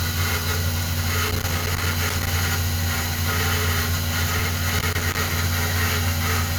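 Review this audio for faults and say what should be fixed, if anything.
Loose connector crackle runs from 1.29 to 2.27 s and again from 4.70 to 5.31 s. Each stretch is an irregular burst of scratching and crackle over the sound. A worn or dirty contact in the signal path is opening and closing as it shifts. That chops the signal, and any DC on the line turns each break into a pop. Reseat or replace the suspect cable or jack, clean the contacts, and strain-relieve the connection so it cannot move during recording.

Compressed frames skipped at 3.01 s and 4.39 s. At each point the audio jumps forward, by roughly a tenth of a second at 3.01 s and about 150 ms at 4.39 s. The jump lengths fit whole frames being dropped, about five and seven frames of 20 ms. The decoder never played those frames, either because they were missing from the file or because it rejected them as corrupt. Re-encode or re-transfer from an intact source and verify file integrity after copying so damaged frames are caught before playback.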